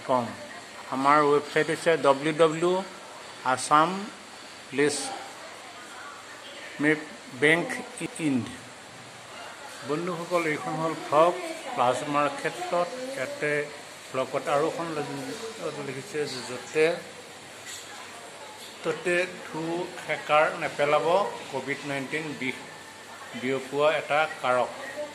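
At 0.82 s a short stretch of about 93 ms plays twice in a row, a quick stutter that makes the sound hiccup. At 8.06 s a longer piece of about 186 ms repeats once. These are repeated frames: compressed blocks were stored or sent twice, and the decoder played them again. The lengths fit one and then two codec frames. Each repeat adds its own length to the audio, about 0.28 s in total.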